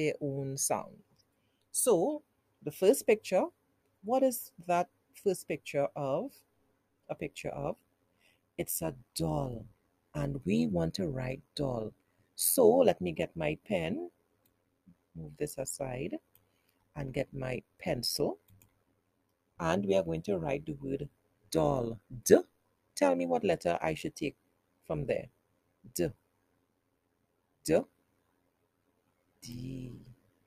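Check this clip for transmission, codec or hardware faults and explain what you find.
One fault appears: overlap-add ripple from 7.21 s to the end. The frames were rejoined with overlapping windows whose gains don't sum evenly, so the level dips about 11 dB once per frame, around 100 times a second. It sounds like a metallic buzz with extra tones around each note. The waveform shows a regular scalloped envelope, and the spectrogram shows evenly spaced vertical banding.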